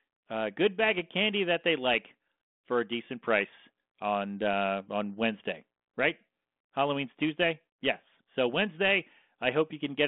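Nothing goes wrong anywhere in this speech, which comes over a G.726 ADPCM line at 32 kbit/s, heard as the usual telephone band of roughly 200 Hz to 3.5 kHz with only a light touch of the codec's graininess.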